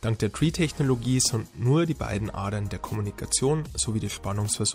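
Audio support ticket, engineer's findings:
No audible faults found; nothing to report.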